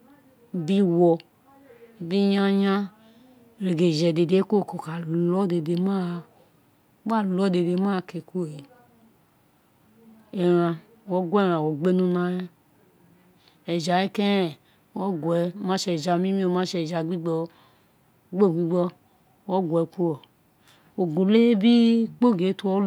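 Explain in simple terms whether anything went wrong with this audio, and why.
Nothing went wrong here; there's no dropout, glitch or other technical fault to hear anywhere in this speech recording.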